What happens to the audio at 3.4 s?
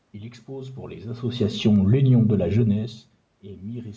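Nothing goes wrong at 3.4 s; the speech carries on intact through that moment, with no dropout, click or distortion to be heard.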